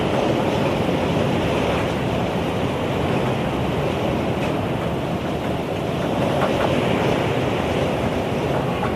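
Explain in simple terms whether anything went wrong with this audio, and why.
Nothing went wrong; the sound carries no audible technical problems.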